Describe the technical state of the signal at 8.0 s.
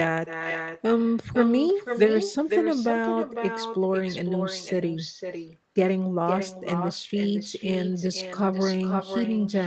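At 8.0 s the speech carries an echo with no canceller, present across the whole clip: the far end's loudspeaker output re-enters its microphone unremoved, returning each phrase roughly half a second later, about 7 dB down, as a thinner shadow.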